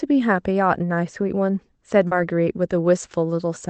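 At 2.07 s, short concealed packet loss: 40 ms never reached the decoder, so it extended the preceding speech, leaving a brief smear until 2.14 s.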